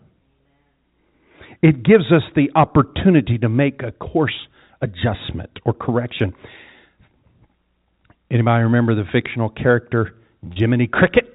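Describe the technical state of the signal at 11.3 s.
At 11.3 s the speech is intact, carried through the G.711 telephone coding with its usual limit of nothing above 4 kHz.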